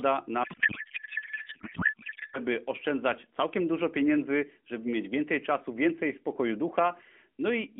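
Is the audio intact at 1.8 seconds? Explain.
No. At 1.8 seconds the clip is inside a codec payload misread that runs from 0.44 to 2.39 s. The decoder reads the frames in the wrong packing, consistent with octet-aligned AMR being parsed as bandwidth-efficient. Every field lands in the wrong place, yet the frames still look valid. So the speech is replaced by garbled noise and warble that barely follows it. The band-limited narrowband speech around this span carries only light codec damage.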